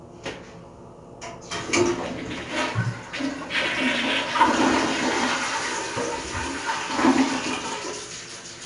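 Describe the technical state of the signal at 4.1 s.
At 4.1 s the sound carries 4-bit ADPCM compression, present throughout the clip. Each sample is coded as a coarse adaptive step from a prediction, leaving gritty hiss that rises with loud passages and smears sharp attacks. A spectrogram shows a raised noise floor tracking the signal and nothing above about 10.6 kHz, which fits a coding rate near 88 kbps.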